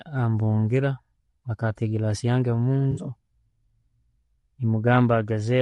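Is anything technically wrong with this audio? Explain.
Yes, two faults are audible in this speech clip.

Throughout, the speech has a rough, grainy texture, with noise filling the gaps between harmonics and a top band that sounds thinned and synthetic. This is likely low-delay AAC compression (AAC-ELD). Its short analysis frames resolve pitch harmonics poorly and spend bits inefficiently, so at a constrained rate the damage is plainly audible. The degree of it points to a bitrate around 32 kbps.

From 2.91 to 3.01 s there is AAC frame loss with concealment. Roughly 60 ms of coded audio went missing, which fits three lost frames. The decoder covered the gap by reusing the last good spectrum with altered phase and estimated energy. The result is a brief smeared, noisy or phasey patch rather than a clean dropout.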